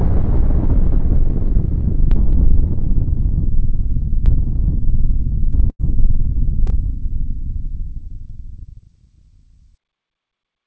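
At 5.70 s a burst of packet loss hits: a short run of packets, about 100 ms of audio, never arrived in time to be played. The receiver covered the hole by extending the last sound it had for about 90 ms, letting it sag in level, so a held buzz or fading hiss replaces the real audio until 5.81 s. Playback then picks up further along, with that stretch simply gone.

From 6.67 to 6.70 s there is a short concealed packet loss. About 20 ms of audio failed to reach the decoder in time, and the receiver patched roughly 10 ms of it by continuing the preceding sound before blending back into the incoming stream. The result is a brief smear or wobble rather than a clear gap. Throughout, nothing is heard above 8 kHz, which fits a wideband call codec such as G.722.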